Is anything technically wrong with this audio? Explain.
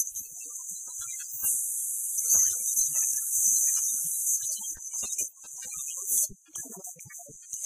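Yes, two kinds of fault.

Compressed frames skipped at 2.25–2.28 s and 4.34–4.39 s: missing or rejected frames make the sound jump ahead. The first jump is about a fifth of a second, the second a bit less, each a few 46.4 ms frames.

Repeated buffer at 2.73 s, 4.77 s and 6.13–6.18 s: the audio arrived late, so the device replayed an 11.6 ms chunk, which fits a 512-sample buffer. It replays once at the first two points and four times at the last, giving clicks and then a short buzz.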